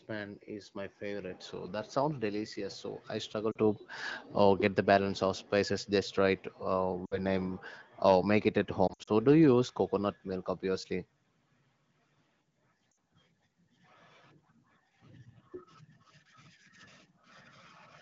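Lost AMR speech frames hit at 3.51, 7.06, 8.88 and 12.92 s. The decoder papers over each gap by replaying the last good pitch and vocal tract settings at falling gain, so each gap drops to near silence within two frames and the voice comes back weak or rough for a moment. The worst is around 8.88 s, where 120 ms of losses are scattered across 200 ms.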